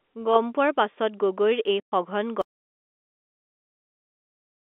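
At 1.8 s the network dropped a short run of packets, and the receiver had nothing to conceal them with, so it played silence until 1.92 s. That 120 ms hole fits six lost packets of 20 ms each. The result is packet loss filled with silence: the speech stops abruptly mid-flow and restarts, with hard edges where the waveform is cut off and resumed.

From 2.42 s to the end of the clip the audio drops out to silence. The input most likely lost its connection, through a failed link, an unplugged device or a stray mute, while the recorder carried on writing silence. The speech cuts off partway, and what follows is dead silence with no room tone. On the narrowband telephone line, carried as G.711 A-law, the gap stays silent.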